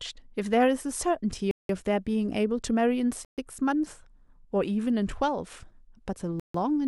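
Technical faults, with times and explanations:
1.51–1.69 s, 3.25–3.38 s and 6.40–6.54 s: Bluetooth stalls. The speech drops out to dead silence three times, for about 180 ms, 130 ms and 150 ms, then carries on. These are too clean to be codec smearing. It sounds like playback simply starving, most likely because radio interference held up packets long enough for the receiver's buffer to empty, leaving it waiting for retransmissions before it could play again.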